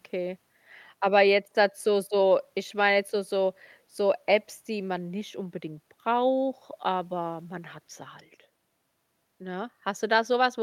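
Nothing here sounds off: the speech carries on from the first moment to the last without a single technical fault to point to.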